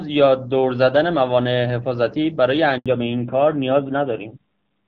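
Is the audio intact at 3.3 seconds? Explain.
No. From 2.86 s to the end at 4.87 s, including 3.3 s, the clip has a fallback to narrowband. The call switches abruptly from the AMR-WB HD Voice codec to an older narrowband codec, which fits AMR-NB at around 7.4 kbit/s. Nothing above 4 kHz survives, so the voice turns dull and rougher. A plain low-pass filter would only muffle the sound. This switch also adds the raspy texture of a low-rate codec, and it begins at one clear instant.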